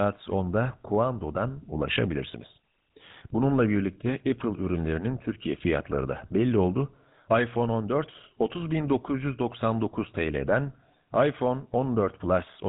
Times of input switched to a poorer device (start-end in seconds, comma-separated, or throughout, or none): none